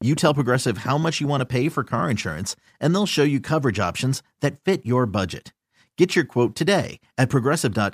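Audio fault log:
0.02–2.0 s, train of clicks: about ten unevenly spaced pulses, five per second, near speech level, likely interference or a faulty connection or power supply; thin vertical spectrogram lines, sharp waveform spikes.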